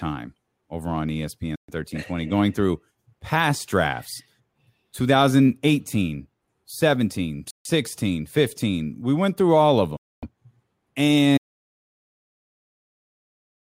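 A likely Bluetooth stall, with the headphone buffer running dry, pauses the speech at 1.56, 7.51 and 9.97 s (after "went through all of") for 130, 150 and 260 ms before it resumes. At 11.38 s, a likely lost input causes an audio dropout to silence: the sound cuts to dead digital silence that lasts to the end.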